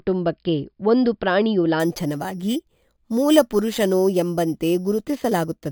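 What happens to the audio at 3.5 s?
At 3.5 s the speech is inside a stretch of imaging from sample-and-hold upsampling, running from 1.80 s, right after "ಒಂದು ಪ್ರಾಣಿಯು", to the end. The rate was raised from 11 kHz to 44.1 kHz by repeating samples without smoothing. Mirrored spectrum copies between about 5.5 and 11 kHz, roughly 21 dB down, add a metallic fizz.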